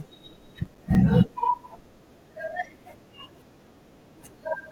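A short speech recording with one fault. From 0.65 to 0.95 s there is processor overload crackle. A gritty, tearing crackle rides on the sound for that stretch, then stops. The processor could not finish its audio buffers in time. Each missed buffer dropped out as a brief silence with hard edges. The gaps sound roughly 5 ms long, and a handful land in quick succession. Together those clicks form the burst.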